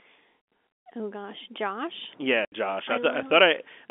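At 2.45 s there's a 70 ms hole in the speech, ending at 2.52 s just before "I I". That's packet loss filled with silence: the gap fits several 10 ms packets going missing, with a hard cut in and out at each edge.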